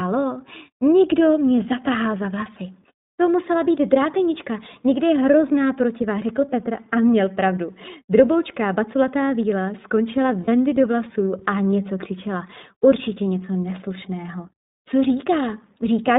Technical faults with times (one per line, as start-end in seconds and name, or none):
0.00-16.19 iLBC codec
1.57 lost iLBC frames
10.44-10.48 lost iLBC frames